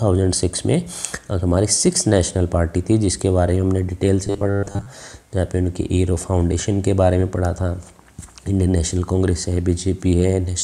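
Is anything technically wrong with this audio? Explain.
Yes. From 4.27 to 4.87 s there is robotic sound from repeated short buffers. The audio turns into a rigid, metallic buzz at 100 Hz. The likely cause is audio arriving too seldom, with a 10 ms chunk repeated over most of that stretch.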